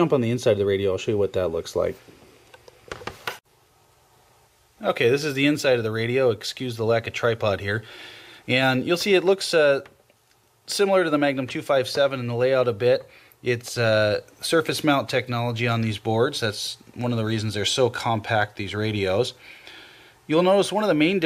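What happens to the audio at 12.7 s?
Nothing goes wrong at 12.7 s; the audio plays through that moment intact, with no dropout, click, distortion or other fault.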